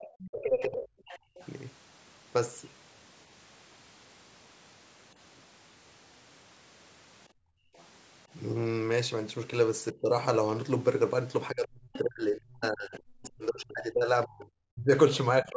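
Speech recorded through a call's microphone path, with three kinds of echo-canceller trouble. Speech suppressed in double talk occurs from 0.00 to 0.82 s, from 9.93 to 10.11 s and from 11.5 s to the end. The talker's level dips by roughly 25 dB in the first two stretches and by around 40 dB over about three seconds of the last. This is likely because the canceller could not separate the near talker from loudspeaker echo while both sides spoke, and turned everything down. The other side's voice leaking through is heard from 0.04 to 1.47 s at roughly 20 dB below the speech, from 7.75 to 7.84 s at around 35 dB down, and from 11.93 to 11.99 s at roughly 15 dB down. This is likely residual loudspeaker sound that the canceller failed to remove from the microphone signal. Background gated by the echo canceller drops the room sound by about 26 dB from 1.19 to 1.36 s and by about 29 dB from 7.29 to 7.75 s. 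In both cases the canceller clamped the microphone during loudspeaker playback and then released it, so the background returns.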